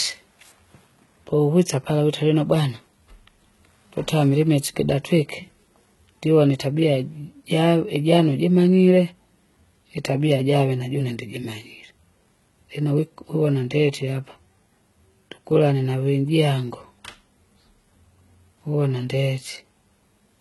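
From start to finish the treble of the speech sounds synthetic: s sounds come out gritty and lisped, and the top end has a bright but metallic sheen, with nothing at all above about 11.8 kHz. The damage is heavy throughout. This is likely HE-AAC compression at a very low rate, which fits roughly 16 kbps: only the lower spectrum is coded, and the treble is rebuilt by copying lower bands upward, so its harmonics no longer match the real sound.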